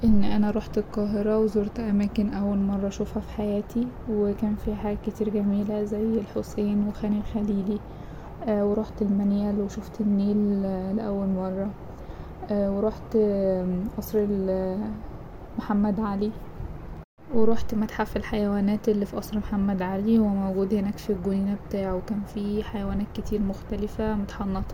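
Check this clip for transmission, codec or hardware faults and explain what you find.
One fault is present: DAB burbling between 6.55 and 6.58 s, after "حاجات كتير جميلة زي" and before "وخان الخليلي". A brief burble sits over the speech. Weak reception let bit errors slip past the error correction into the MP2 audio data. Corrupted samples then put short blips of noise into single sub-bands. The short burst points to a few damaged frames and an error rate of around a tenth of a percent.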